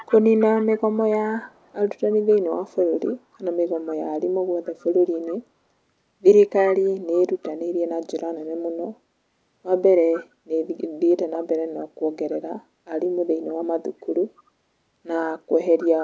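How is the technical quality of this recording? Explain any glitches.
One glitch stands out: an echo leak during the opening part of the speech. From 0 to 5.33 s, a faint copy of the voice trails about 276 ms behind, roughly 20 dB quieter. The likely cause is a speakerphone whose echo canceller let its own playback return. The call processing limits the sound to 8 kHz.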